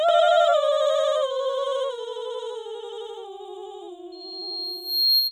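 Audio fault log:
Throughout: channel delay (doubling). One side of this music is arriving about 85 ms after the other, and once the two get folded down to mono you hear both copies at equal strength. That gap is too long to blur into the original, so every attack comes back as a clear slap or a doubled hit. An 85 ms offset fits a 4096-sample buffer sitting in one channel's path.
4.12 to 5.26 s: loudspeaker feedback squeal. A single tone around 4.2 kHz starts creeping up and takes about a second to build, ending up roughly 5 dB above the music before it cuts off at 5.26 s. The microphone is hearing the speaker it feeds, and at that one frequency the loop gain tipped past one, so the tone keeps feeding itself and swelling into a whistle.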